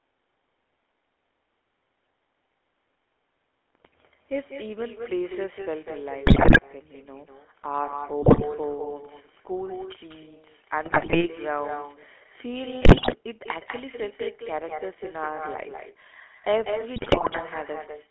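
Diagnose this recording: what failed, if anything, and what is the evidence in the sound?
Echo with no canceller, in call processing. Every phrase returns about a fifth of a second later, roughly 7 dB quieter and thinner. The far loudspeaker leaks into its microphone unremoved.

GSM full-rate codec damage, at the codec stage. The speech sounds buzzy and gravelly throughout, confined to 300 Hz–3.4 kHz. Pulse-excited coding at 13 kbps discards fine detail.

GSM bit errors, on the radio link. Squawks and gargling occur at 6.26–6.60, 8.22–8.44, 10.84–11.27, 12.82–13.16 and 16.96–17.40 s. Corrupted parameters distort whole frames.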